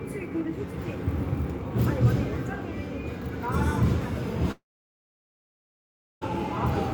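From 4.51 to 6.23 s the sound smears into a fading buzz, then goes silent for about 1.6 s before resuming; likely a long network dropout that lost 1.7 s.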